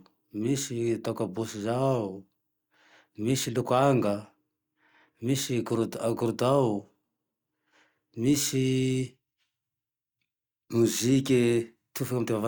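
Nothing stood out on listening to this recording of speech.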